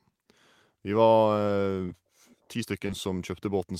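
Around 1.85 to 1.91 s, and again around 2.87 to 2.91 s, the speech has short concealed packet loss. Roughly 40 ms and then 20 ms of audio arrived too late, so the decoder bridged the gaps by extending what came before, leaving brief smeared, wobbly patches.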